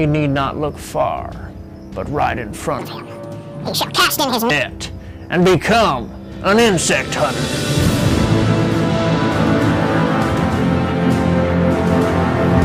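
From 2.79 to 4.50 s, a section at the wrong speed runs 1.76 times too fast. The sound turns high and hurried at once, up nearly ten semitones. Tempo and pitch moving together set it apart from a pitch shift. A mismatched clock is the likely cause.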